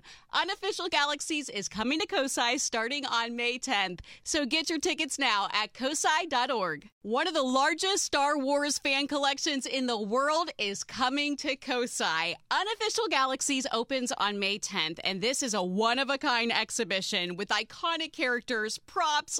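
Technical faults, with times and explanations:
No technical faults can be heard anywhere in the signal.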